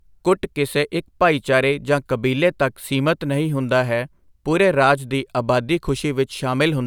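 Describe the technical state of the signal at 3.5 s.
At 3.5 s the audio is intact, with no audible dropout, distortion, glitch or other signal fault at that moment.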